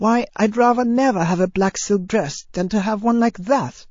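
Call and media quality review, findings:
Speech, throughout: plainly audible watery, swirly artefacts, smeared onsets. Likely MP3 compression, fits a bitrate near 32 kbps. Weak lines switching on and off between frames.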